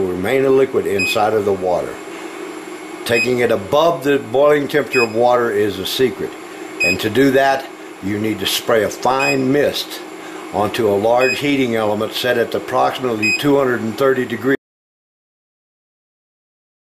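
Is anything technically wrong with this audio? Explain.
Yes. At 14.55 s the sound cuts off abruptly and the rest of the clip is silence, with no room tone at all. This is an audio dropout to silence, likely from the input being lost while the recorder kept writing silence.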